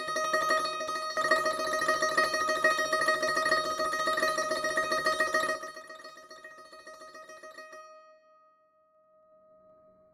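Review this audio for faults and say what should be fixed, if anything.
A ticking zipper noise rides on the music from 5.42 to 5.84 s and 8.9 to 9.78 s: the level drops then rises by about 20 dB in unsmoothed 2 dB steps, around 20 and 10 per second. Fix it by interpolating gain changes per sample, or ramping each step, instead of jumping once per block.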